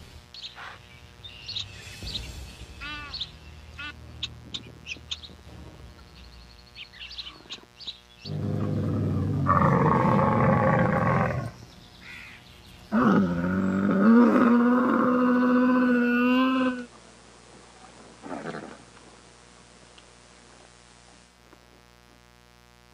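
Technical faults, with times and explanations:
Throughout: mains buzz. Sharp switching spikes from a dimmer, a rectifier or a missing shield are getting into the signal path twice per cycle of the 60 Hz supply. That puts harmonics of 60 Hz up to several kHz, so the sound carries a steady, raspy buzz rather than a smooth hum. It sits roughly 30 dB below the programme and does not change over the clip.
16.42 to 21.42 s: digital radio blending to analogue. The hybrid receiver lost its digital signal and cross-faded over about 206 ms to the FM analogue broadcast of the same station, then faded back at 21.42 s. While on FM the audio picks up hiss about 30 dB below the signal. The overall level stays the same across both blends.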